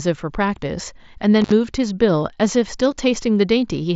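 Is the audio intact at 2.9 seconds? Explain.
No, concealed Bluetooth headset packet loss hits at 2.91 s: about 7.5 ms is missing, which fits a single lost packet, and the receiver patches the gap with the closest-matching piece of the preceding waveform, so the glitch is nearly inaudible.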